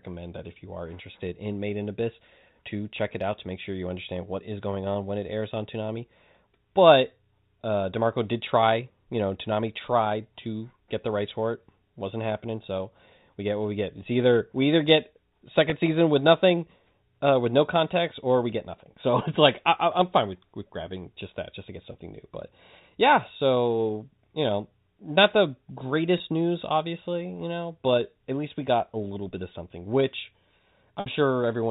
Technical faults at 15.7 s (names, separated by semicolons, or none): packet loss with pitch repetition